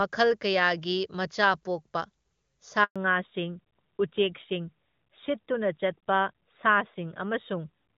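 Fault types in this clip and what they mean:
Handover gap: The call was passed from one network to another, and for about 120 ms, from 2.84 to 2.96 s, no speech frames reached the receiver. The speech fades out within a few tens of milliseconds and the line goes silent until the new link takes over, so whatever was said in that stretch is simply missing rather than garbled.
Fallback to narrowband: After the switch the call lost HD Voice and dropped to an older narrowband codec. The sound points to a move from AMR wideband at its top rate, with at most faint codec damage, down to AMR-NB at around 12.2 kbit/s. From 2.96 s to the end nothing remains above 4 kHz, so the speech turns duller and rougher.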